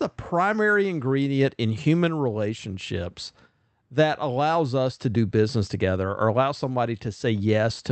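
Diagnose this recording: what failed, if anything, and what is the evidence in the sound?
Nothing failed in this recording.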